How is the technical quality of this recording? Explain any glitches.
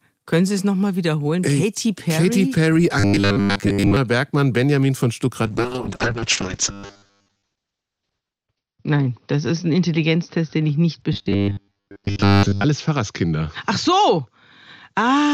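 The recording has two kinds of fault: a recurring robotic buzz and a sustained drop in call bitrate.

Robotic sound from repeated short buffers, at 3.0–3.97 s, 6.71–7.42 s and 11.13–12.64 s: the speech becomes a rigid metallic 100 Hz buzz. This likely comes from a 10 ms chunk being replayed while most of the real audio is skipped. On a spectrogram it shows as evenly spaced horizontal harmonic lines, and the waveform shows near-identical repeating cycles.

Call bitrate drop, from 5.47 s to the end: the bitrate falls from 32 to 6 kbps and stays at its lowest for 2.87 s. The encoder cuts the bandwidth from 20 kHz to 6 kHz, so the speech turns muffled and rough. A spectrogram shows energy abruptly ending above 6 kHz.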